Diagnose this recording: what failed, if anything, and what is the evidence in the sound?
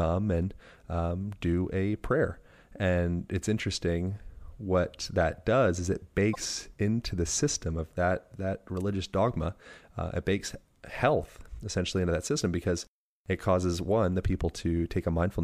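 The codec stage failed: there's damaged data in the compressed stream. Right after "that does is it", from 6.31 to 6.36 s, a brief glitch cuts in before "into the system of". Corrupted bytes there threw the decoder off sync until it found the next clean frame header.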